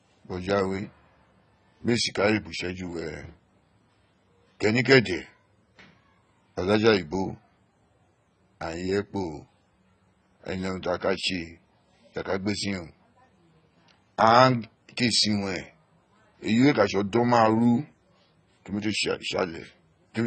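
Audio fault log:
Throughout: AAC compression. The speech sounds dull and smeared, fizzy and warbling on sibilants, with nothing above 8.6 kHz. The likely cause is heavy AAC-LC coding at what fits a bitrate near 16 kbps, where scarce bits force a lowered cut-off and coarse, gappy quantisation.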